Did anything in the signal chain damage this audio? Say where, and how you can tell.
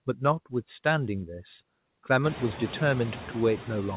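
Yes, in call processing: noise suppressor artifacts run throughout. Steady background drops by about 17 dB between phrases and returns under the speech. Unlike a noise gate, the suppressor cuts band by band, so the speech is never chopped off whole.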